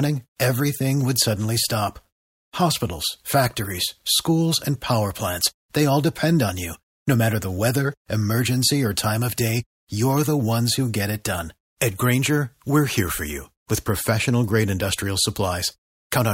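No technical faults can be heard anywhere in this speech.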